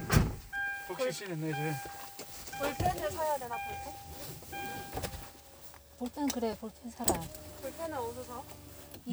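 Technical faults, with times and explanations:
1.96 s to 8.81 s, clock drift buffer slips: a short, regular click lands about every 2.28 s, roughly four in all, each a jump in the waveform. That steady spacing is the giveaway. This is likely two devices each running on their own clock, a few hundred ppm apart, so the buffer between them creeps toward full or empty until a few dozen samples get dropped or repeated, and each slip is heard as a click.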